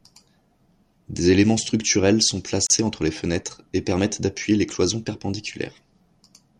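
A gap at a join of encoded pieces opens at 2.67 s and lasts about 35 ms, to 2.70 s. The speech was encoded in separate pieces, apparently about 6 s long, and joined without trimming. The encoder's start-up delay and the padding of the last frame remain, leaving a short hole of silence. It sounds like a brief dropout with smeared edges, after which the speech resumes exactly where it stopped.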